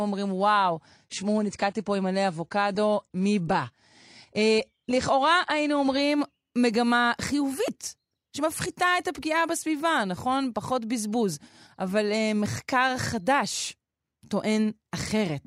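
Adaptive stream starting at a low bitrate, from 0.0 to 6.0 s: the speech opens dull, with nothing above 10.2 kHz and heavier codec artefacts, which fits AAC at around 32 kbit/s. It then sharpens abruptly and without a gap, as the player steps up to a higher-bitrate version near 96 kbit/s.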